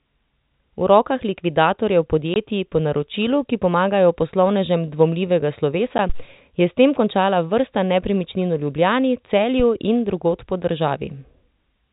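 It's a speech clip, carried over a telephone-band channel with nothing above 4 kHz, and it has two kinds of trouble. There's packet loss filled with silence at 2.34 to 2.36 s, between "rokah likvidatorjev" and "po naročilu ki pomagajo", and again at 5.98 s after "ki pomagajo poslovnežem dvomljivega". Those 20 ms and 10 ms holes fit lost 10 ms packets, and they have hard edges. Then there are phantom power thumps at 6.09 to 6.28 s and at 9.60 to 9.65 s, just before "in drugod po". Each is a low bump from a supply step on a live input, dying away in about 42 ms and 13 ms respectively.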